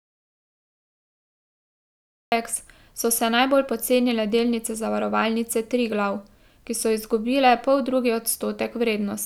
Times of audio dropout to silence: 0.00-2.32

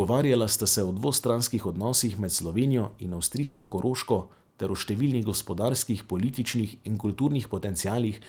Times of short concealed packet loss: none

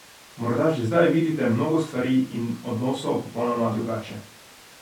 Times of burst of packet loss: none

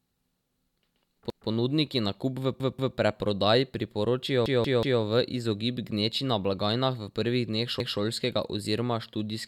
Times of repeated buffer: 1.30-1.49, 2.60-2.97, 4.46-5.02, 7.80-7.99

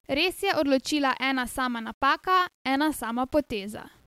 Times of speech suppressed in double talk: none

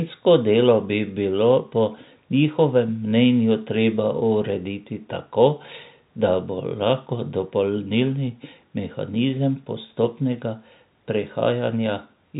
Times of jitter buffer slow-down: none

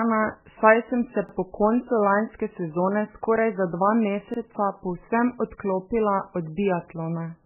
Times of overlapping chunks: 1.29-1.34, 4.34-4.39

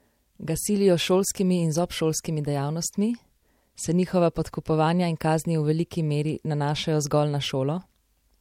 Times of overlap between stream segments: none

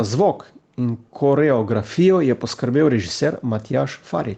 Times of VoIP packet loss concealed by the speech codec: none

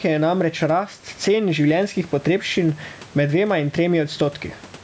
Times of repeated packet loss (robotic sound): none

